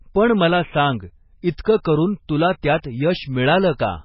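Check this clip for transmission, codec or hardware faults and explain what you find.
Two faults are present: heavy lossy coding across the whole clip, and three brief pre-echoes.

MP3 compression runs throughout the speech and is the likely cause of the damage. Nothing remains above 5.6 kHz, which fits a very low bitrate around 16 kbps. When bits run short, the encoder discards the treble at that fixed limit and zeroes quieter frequency lines, which then flicker on and off between frames. The result is watery, swirling speech with dull sibilants. A hard ceiling combined with this frame-to-frame swirl points to a codec rather than a simple low-pass filter, which would leave a steady, dull tone with no warble.

Pre-echo occurs at 1.57 s, just after "पण मला सांग"; at 1.83 to 1.85 s, shortly before "करून तुला"; and at 2.83 s, after "करून तुला". Each lasts about 13 to 20 ms. The codec spreads noise sized for a loud onset across the whole transform block, including the quiet moment before the onset. 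That gap fills with a short hiss, and the attack sounds blunted. The hiss arrives before the onset, not after it, which distinguishes it from a reverb tail or a dropout click.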